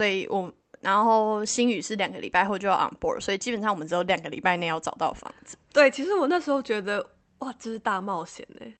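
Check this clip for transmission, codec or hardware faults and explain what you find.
No transmission, codec or hardware faults can be heard in the speech. It has passed through a call codec, and the top of the spectrum stops at about 8 kHz, which fits Opus working as intended at a moderate bitrate around 32 kbps.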